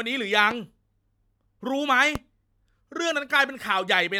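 A sharp loud pop cuts into the speech at 0.51 to 0.54 s and again, noticeably harder, at 2.15 to 2.18 s, each a single hit peaking roughly 10 to 15 dB above the speech, which carries on beneath. Likely cause: a brief electrical spike from a switch, connector or static discharge.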